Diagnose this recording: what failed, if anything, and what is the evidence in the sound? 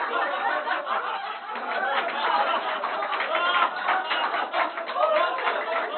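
Nothing failed in this recording of everyday sound. No stage between capture and playback leaves a mark that a listener could point to.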